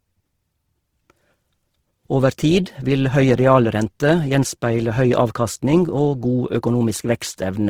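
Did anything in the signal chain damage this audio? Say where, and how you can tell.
Yes. Opus compression runs through the whole speech clip, at the codec stage: the sound is grainy, rough and noisy rather than swirly, with no obvious spectral holes. That fits the codec's music mode, which likely ran near 16 kbps, filling starved bands with folded or noise content.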